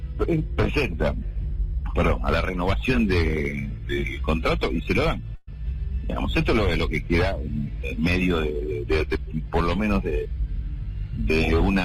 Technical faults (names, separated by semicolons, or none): burst of packet loss